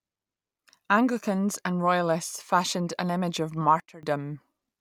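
Speech clip with a sudden gain jump at 3.8 s, right after "fashioned an image of". The level drops by about 18 dB from one sample to the next, and the voice and background noise fall together. It holds at that reduced level until 4.03 s, then returns. A step with no ramp, affecting signal and noise equally, likely comes from a digital gain setting or bit shift being applied instantly rather than smoothed in over several milliseconds.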